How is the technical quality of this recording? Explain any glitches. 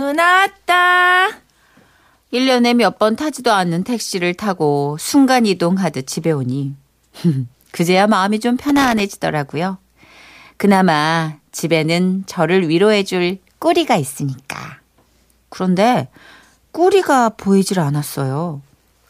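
The speech has one glitch: loose connector crackle from 8.69 to 9.00 s. A worn or dirty contact intermittently breaks the line, chopping the signal and popping from any DC, so it sounds like irregular scratchy bursts, unlike a digital click, which is a single clean spike.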